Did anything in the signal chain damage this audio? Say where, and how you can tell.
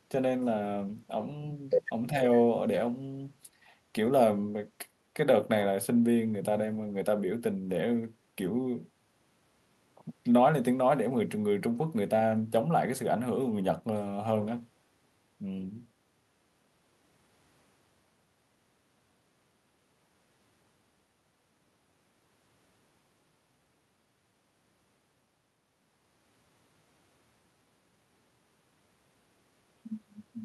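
Yes. Speech suppressed in double talk appears at 2.11 to 2.17 s, in the call-processing stage. For roughly 70 ms the speech level dips by about 5 dB, then returns to its previous level. A short dip like this is likely the echo canceller's suppressor reacting to both ends talking at once. It cannot tell the near talker from the loudspeaker echo in its microphone feed, so it attenuates everything and pulls the wanted speech down with the echo.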